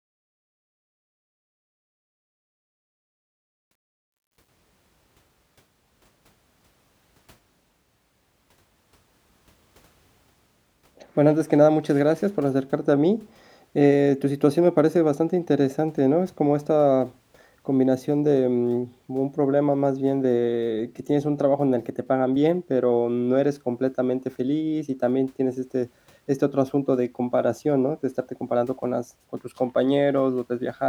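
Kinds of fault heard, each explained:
Truncation distortion on a fade: the undithered fade-in, fitting a 10-bit stage, stair-steps near silence, so grit worsens as level falls (worst before 3.2 s), unlike steady hiss.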